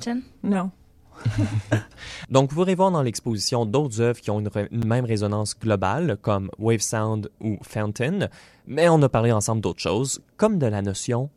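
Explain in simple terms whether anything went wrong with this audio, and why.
Two tiny dropouts show up in this speech, both a block of digital silence: one at 4.82 s and one at 9.10 s. For a split second the sound is replaced by silence, about 8 ms the first time and about 2 ms the second, then snaps straight back with no fade. Those hard edges make each one come across as a quick tick. The playback or processing probably didn't hand over its next chunk of audio in time, leaving a gap.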